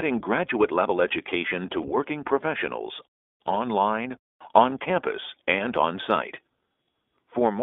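The whole clip runs through the iLBC codec: speech squeezed into a 250 Hz to 3.6 kHz band, audibly rough and synthetic, consistent with its 15.2 kbps, 20 ms-frame mode. Lost iLBC frames hit at 1.82 to 1.86 s and 4.70 to 4.72 s. Each dropout is patched with a repeated pitch cycle plus noise, giving a brief buzzy held vowel before the speech snaps back.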